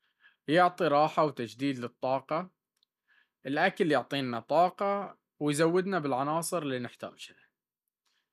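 No technical faults can be heard anywhere in the speech recording; the signal stays continuous and stable throughout.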